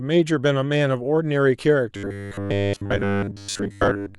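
From about 1.96 s right through to 4.18 s, the speech turns into robotic sound from repeated short buffers. It's a stiff, metallic buzz pinned at 100 Hz that only loosely tracks what's being said. The likely cause is fresh audio not arriving often enough, so playback keeps looping the last chunk, which fits a buffer around 10 ms long. Most of that stretch is repeats rather than real signal, which is why it sounds so mechanical.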